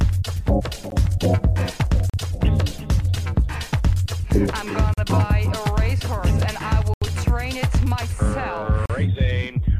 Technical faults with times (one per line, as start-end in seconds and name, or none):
0.90 block of digital silence
2.10-2.14 block of digital silence
4.94-4.98 block of digital silence
6.94-7.02 block of digital silence
8.86-8.90 block of digital silence